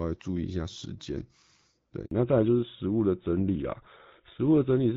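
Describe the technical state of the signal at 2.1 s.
At 2.1 s the signal is inside a handover gap running from 2.05 to 2.11 s. As the call switched networks, no speech frames arrived for 60 ms, so the sound fades within a few tens of milliseconds and then goes silent. A waveform shows a flat line and a spectrogram a blank vertical stripe.

From 2.11 s to the end comes a fallback to narrowband. The call leaves HD Voice, whose clean wideband sound fits AMR-WB at 12.65 kbit/s, for what sounds like GSM full rate. Nothing remains above 4 kHz, so the sound turns duller and rougher, and the spectrogram's upper band is cut off sharply.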